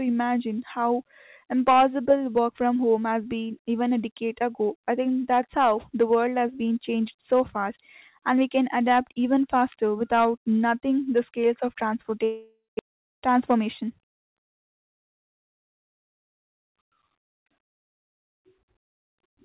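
A speech recording carried over a narrowband call path, with nothing above 4 kHz, has a long network dropout from 12.24 to 12.81 s. The gap is likely lost packets: the receiver stretches the last sound into a fading buzz, then about 200 ms of silence remains, and roughly 400 ms of audio never returns. From 12.89 to 15.79 s a jitter buffer speed-up follows as the receiver trims pitch-period pieces to shed the extra delay, about 150 ms in all. Speech runs roughly 4% fast at unchanged pitch.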